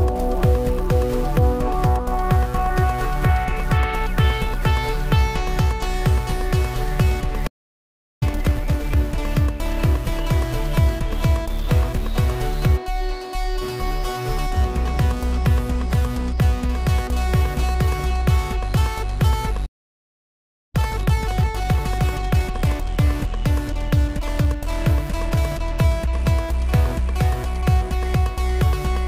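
At 7.47 s the audio cuts to silence for about 0.74 s, a playback stall, likely the player running short of data or its thread being blocked. From 8.23 to 8.97 s the sound runs hurried at normal pitch, twice normal speed: time-compressed catch-up, where the player trims its backlog by removing and cross-fading short pieces. The pattern repeats with a longer silence of about 1.08 s from 19.65 s, then catch-up at 1.5 times speed from 20.75 to 22.89 s.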